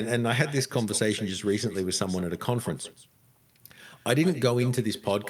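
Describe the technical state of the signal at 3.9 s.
At 3.9 s the speech is trailed by a fainter, thinner copy arriving roughly 150 ms behind it, about 16 dB down. This is echo with no canceller, present throughout: the far end's loudspeaker feeds its microphone, returning the talker's voice after the round trip.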